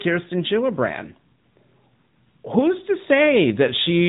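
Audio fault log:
Throughout: AMR narrowband mobile codec. Nothing above 3.8 kHz survives, and the speech carries a plainly audible buzzy, synthetic edge because each 20 ms frame is rebuilt from a vocal-tract model and a few pulses. This fits a mid-rate mode near 10.2 kbps.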